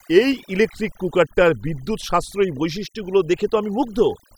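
Throughout the speech, overdone noise removal zeroes bands near the noise floor, leaving near-silent gaps with twinkling specks, and scattered isolated blobs on a spectrogram.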